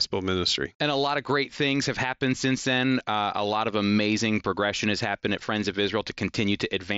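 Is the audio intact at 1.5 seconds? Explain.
Yes, the audio is intact at 1.5 seconds, carried by a working mSBC Bluetooth headset link that leaves nothing above about 7.7 kHz.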